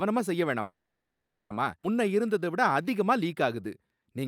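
A call audio freeze runs from 0.61 to 1.52 s. Packets were likely held up, so the sound halts for about 0.89 s, mostly silent, then resumes intact. At 1.82 to 1.85 s a skip ahead drops roughly 0.7 s of speech, and the two sides join almost directly. From 2.04 to 4.25 s a jitter buffer slow-down repeats pitch periods to rebuild its reserve, adding 235 ms and running the speech at 90% speed, drawn out at the same pitch.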